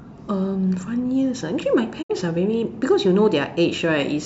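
At 2.01 s the receiver stopped getting usable data, most likely because a short run of frames failed their error check, and it muted rather than play corrupted audio. The speech fades out over about 20 ms, leaving a hole of about 64 ms, consistent with two lost frames, before sound resumes at 2.12 s. This is a digital broadcast dropout: whatever was transmitted during that gap is simply gone, not muffled or delayed.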